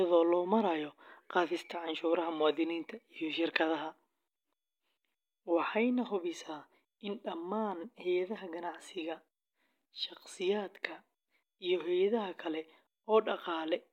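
A short stretch of speech, and there's nothing technically wrong to flag anywhere in it.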